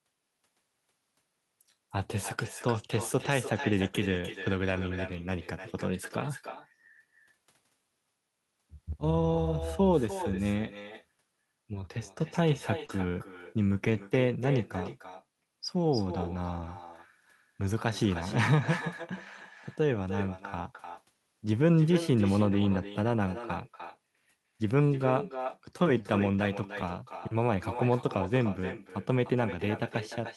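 With no echo canceller at the far end, the loudspeaker playback is picked up by the microphone there and sent back, so the speech is shadowed throughout by a quieter, thinner copy about 12 dB down, arriving roughly 300 ms later.

From 3.87 to 3.97 s, a lost packet rebuilt from error correction: the decoder replaced what sounds like three lost 20 ms packets with the low-bitrate copies carried in the following packets, so 60 ms plays without a gap but sounds rougher and grainier.

Between 12.85 and 12.98 s, a short concealed packet loss: 40 ms of audio arrived too late, and the receiver extended the preceding sound to cover 32 ms of it before blending back, which shifts the timing by roughly 10 ms. The result is a brief smeared wobble. Within that stretch, from 12.89 to 12.91 s, one further packet was rebuilt from error correction, adding a 20 ms patch of the same rough texture.

Error-correction rebuilds recur from 13.86 to 14.00 s (80 ms, consistent with four packets), from 14.84 to 14.86 s (20 ms), and from 26.34 to 26.40 s (40 ms). 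Each time the sound turns briefly coarse, with no dropout.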